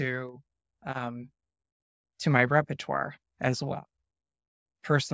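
Listening closely to the speech, nothing stood out as a technical fault at any point.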